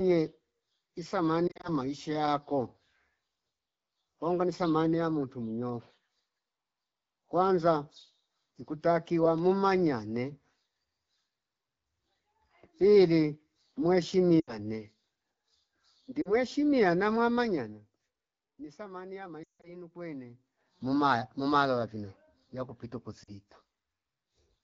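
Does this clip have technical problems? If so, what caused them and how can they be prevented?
Yes. Brief warbles and dips at 1.47–1.69, 14.40–14.58, 16.21–16.35, 23.23–23.36 s, and a drop to near silence at 19.43–19.75 s, are lost AMR speech frames. Radio errors corrupted frames, and the wideband decoder patched them by extrapolating. Better radio coverage prevents this.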